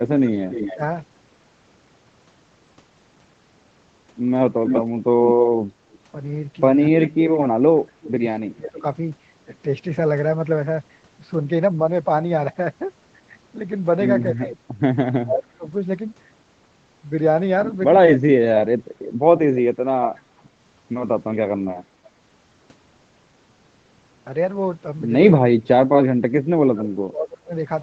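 A speech recording in which a far-end echo canceller likely let loudspeaker pickup through, so a delayed echo leak of the voice returns at 0.26–0.77 s, 4.61–5.98 s and 7.04–8.70 s. It trails by roughly 280 to 310 ms and sits somewhere between a few dB and about 20 dB under the speech, loudest around 5 s. The canceller also likely misjudged overlapping talk as echo, producing speech suppressed in double talk. The voice dips by only a few dB at 0.75–0.79 s, but sinks by about 25 to 35 dB, at times cutting out in pieces, at 6.91–8.84 s, 14.31–15.66 s, 18.16–20.51 s and 25.73–27.54 s.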